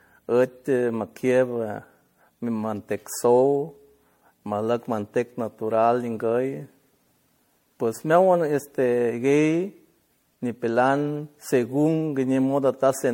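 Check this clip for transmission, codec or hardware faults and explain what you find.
One codec fault runs through the speech from start to finish. Throughout, generation loss: swirly, hollow and smeared, with blurred attacks and nothing above 16.5 kHz. It likely comes from about seven MP3 re-encodes, consistent with 64 kbit/s, that stacked noise and spectral holes, which is worse than a single encode would sound.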